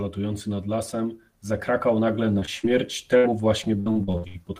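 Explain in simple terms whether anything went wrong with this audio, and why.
Several stretches of this speech recording arrived damaged, all from the same underlying problem: pieces of the audio stream didn't reach the listener's end in time.

First come three moments of short concealed packet loss, at 2.39 to 2.43 s, 2.45 to 2.49 s, and 2.59 to 2.65 s. In each, a small chunk of the call went missing in transit, about 20 ms for the first two and about 40 ms for the third. The receiving end covered each hole by carrying the last sound forward for that long, then blending back into the real audio. You hear a quick smear or tiny wobble rather than silence, and a brief sound can slip away.

At 3.17 to 3.26 s there is a burst of packet loss. A longer run of audio, roughly 60 ms, failed to arrive all at once. The receiver stretched out the last sound it had and let it fade while waiting, so the voice briefly turns into a held buzz or a dimming hiss. 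When the real audio returns, it picks up further along, and whatever was said in between is simply gone.

From 3.80 to 4.45 s there is repeated packet loss, heard as robotic sound. Here the connection kept dropping pieces over and over, six separate gaps, the longest about 67 ms. Each gap was patched by repeating the last sound, but the next gap came before the audio could settle. About half of that stretch is filled-in rather than real, which makes the speech choppy, with pieces missing.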